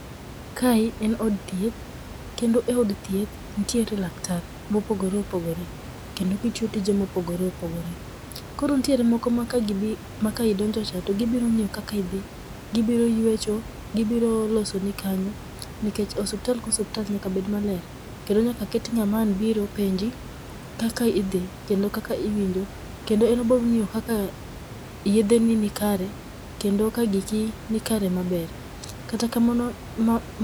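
No technical faults can be heard in this speech recording. The room's own background noise sits about 15 dB below the speech and belongs to the recording itself.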